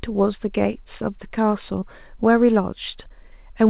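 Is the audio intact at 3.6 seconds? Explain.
Yes, the speech at 3.6 seconds is intact, with no fault at that moment beyond the normal narrowband sound of the call path, which carries nothing above 4 kHz.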